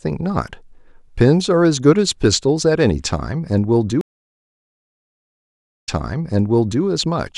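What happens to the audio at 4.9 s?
A stream reconnect spans 4.01 to 6.83 s: the connection dropped and a fresh decoder restarted, leaving 1.85 s of silence before speech resumes, repeating roughly 0.97 s.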